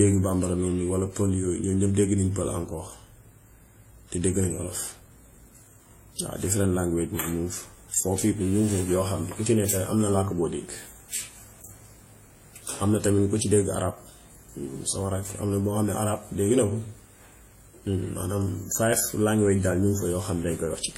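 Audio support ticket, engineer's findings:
Throughout the speech: two different kinds of coding artefact heard together, nothing above 16.2 kHz. Likely transcoding between lossy codecs, sound fits a WMA encode then HE-AAC. The second codec spends bits re-coding the first one's damage. Mixed artefact character rules out single-pass compression.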